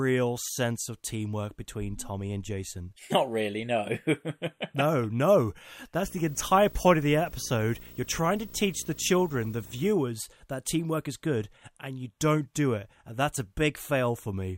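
From 6.03 to 9.92 s, between "no no" and "that teamwork is good", a 59.94 Hz buzz with hash and a 15.7 kHz whine sits roughly 20 dB below the speech: video or display buzz, where a screen or video cable couples its field and line rates into the audio.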